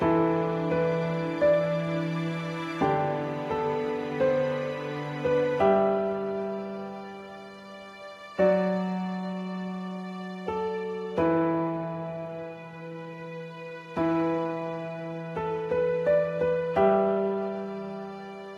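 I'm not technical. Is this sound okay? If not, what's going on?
Yes, it's fine; nothing here sounds wrong.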